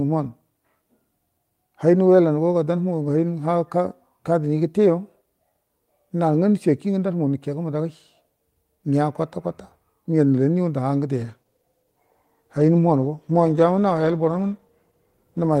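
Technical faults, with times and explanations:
11.18 to 15.6 s, call bitrate drop: From 11.18 s the speech turns rougher and more watery, and it stays that way to the end of the clip. The call's bandwidth estimate fell, so the encoder had to work with far fewer bits. The sound fits a fall from about 32 kbps to about 15 kbps. With fewer bits, each frame is coded more coarsely. The detail smears. The bitrate never recovers here, so the degraded quality lasts about 4.4 s.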